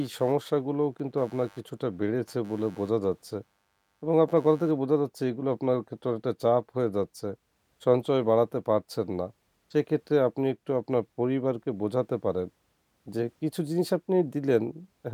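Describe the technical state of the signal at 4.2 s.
At 4.2 s the speech still carries computer activity noise, which runs from the start of the clip to about 4.79 s. Changing processor, graphics or mouse load shifts the ground that the audio circuit shares, so a buzzy, scratchy chirp pulsing around 100 times a second sits roughly 35 dB below the speech. Unlike steady mains hum, its texture shifts with the computer's workload rather than holding a constant tone.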